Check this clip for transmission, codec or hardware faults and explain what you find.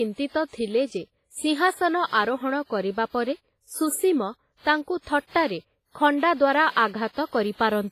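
Two codec faults are present, one across the whole recording and one short event near the end.

Throughout the speech, heavy transform-codec damage is audible, likely WMA compression at a low bitrate around 24 kbps. Coarse quantisation leaves ringing, washy hiss and nothing above 15.4 kHz.

From 6.88 to 6.94 s, pre-echo smears a sharp attack. Block quantisation noise spreads about 59 ms ahead of it, producing a brief hiss and a softened onset.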